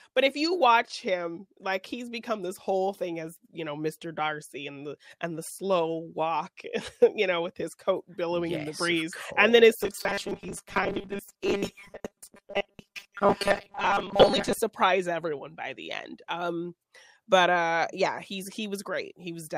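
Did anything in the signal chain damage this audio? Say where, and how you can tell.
Yes, it looks like a driver or buffer problem. From 9.8 to 14.6 s the sound turns into a rigid, metallic 200 Hz buzz, which is robotic sound from repeated short buffers. Audio likely arrived too seldom, so about half the time got filled by looping 5 ms chunks, which sets that pitch.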